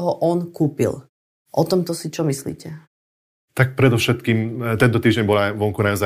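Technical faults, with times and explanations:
No technical faults found.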